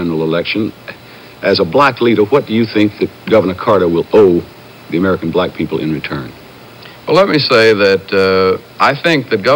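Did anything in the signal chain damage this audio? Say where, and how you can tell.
Yes, hard clipping at 1.47–2.38, 2.78–3.77, 4.14–4.30, 7.14–8.29 and 8.82–9.55 s. A converter or format stage was overdriven by about 3 to 5 dB. Peaks were cut flat, adding high-frequency distortion.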